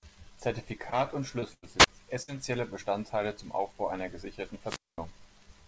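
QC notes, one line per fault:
0.90 s and 1.40 s: short concealed packet loss. About 20 ms of audio failed to arrive, so the decoder extended the preceding sound and blended back, leaving a brief smear or wobble.
1.54 to 1.64 s and 2.22 to 2.30 s: burst of packet loss. About 80 ms and then 60 ms went missing, concealed by a fading continuation of the last sound, heard as a held buzz or hiss with that stretch skipped.
1.78 to 1.87 s and 4.66 to 4.98 s, the second just after "einer gesicherten": wireless microphone squelch dropout. The radio link faded until the receiver muted, giving a rise of static, a near-silent hole of about 31 ms and then 220 ms, and the voice returning.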